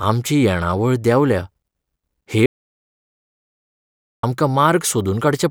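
At 2.46 s the input was likely lost, perhaps a disconnected device or a stray mute, while recording continued writing silence: an audio dropout to silence. The speech stops abruptly, leaving dead silence without room tone until 4.23 s, so about 1.77 s is gone.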